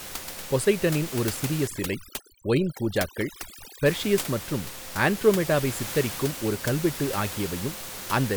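A speech clip carries overdone noise removal from 1.67 to 3.86 s, between "பொசைடனின் ஒரு சிறிய" and "மற்றும் ஆண்ட்ரோமெடாவை சித்தரிக்கும் ஒரு". Noise reduction set too aggressively pulls any band near its noise estimate far down, so the room noise sitting about 11 dB below the speech collapses into near silence with twinkling specks. A spectrogram shows that stretch as a dark, blank floor dotted with isolated bright flecks and frayed harmonic edges.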